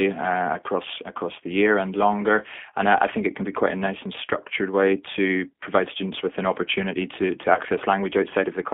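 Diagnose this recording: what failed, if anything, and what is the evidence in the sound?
The speech has a rough, slightly synthetic grain throughout, with the band squeezed to roughly 250 Hz to 3.5 kHz, so sibilants lose their edge and the low end is thin. That points to a codec stage, specifically G.729 running at about 8 kbit/s. The decoder rebuilds each 10 ms frame from a vocal-tract filter, a pitch predictor and a handful of pulses, so fine detail is replaced by a modelled approximation.

At 7.55 to 7.61 s, just after "an opportunity to to", the sound briefly smears into a buzzy tone or coloured noise that fades before normal speech resumes. This is VoIP packet loss concealed by the speech codec, a network-stage fault. The gap fits a single lost 20 ms packet. The decoder filled it by extending its last pitch and filter settings at falling gain. Because each frame depends on the previous one, the recovery stays weak for a few tens of milliseconds.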